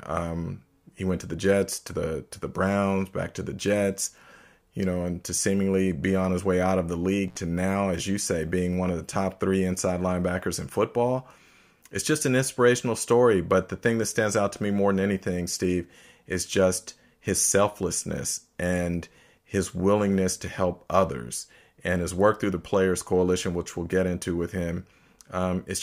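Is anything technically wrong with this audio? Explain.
Yes. There is an intermittent contact fault from 7.28 to 7.38 s, between "way out of the" and "now as you say". A loose connection briefly opens for about 53 ms. The speech drops out with crackle at each edge, leaving faint hiss.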